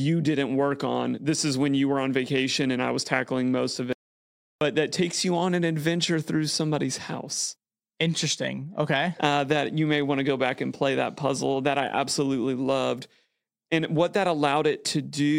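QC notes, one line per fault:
3.93–4.61 s, audio dropout to silence: the speech cuts off mid-flow and falls to silence for about 0.68 s, with no room tone underneath, then resumes abruptly. The input was likely lost briefly while the recorder kept writing silence.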